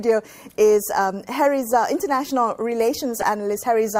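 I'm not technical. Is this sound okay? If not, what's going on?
No. At 3.19 to 3.24 s there's a brief squeak or burst of noise lasting only a few hundredths of a second. This is a corrupt frame decoded: the audio was stored in small compressed chunks, a couple of which got damaged, and the player played them anyway, putting sound in the wrong places. Unlike a dropout, where the audio briefly goes silent, here something new and foreign-sounding is added for that short moment.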